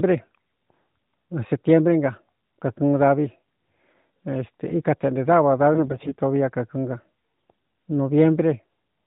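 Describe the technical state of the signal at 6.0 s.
At 6.0 s the sound sits inside a burst of AMR bit errors running from about 5.73 to 6.15 s. Roughly one bit in twenty of the less protected frame data arrives flipped, so the excitation pulses land in the wrong places and the fine pitch, gain and spectral values drift. The result is hoarse, scratchy and gargly while pitch and loudness stay roughly steady. On a waveform the level holds but the cycles turn jagged and irregular. On a spectrogram the harmonic striations blur into grainy noise. Everything stays below 4 kHz, as expected from the narrowband mobile codec carrying the signal.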